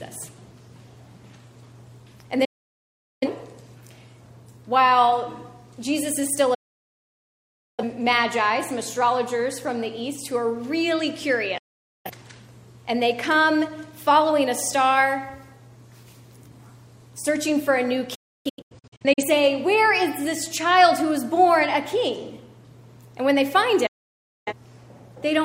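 Digital broadcast dropouts cut the sound at 2.45–3.27 s, 6.54–7.84 s, 11.58–12.10 s, 18.15–19.24 s and 23.86–24.53 s. Each mutes behind an 8 ms fade. The receiver lost valid frames, so that audio is gone. The fourth breaks into several short holes.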